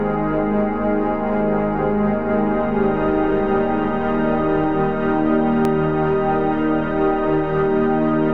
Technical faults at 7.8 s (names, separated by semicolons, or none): none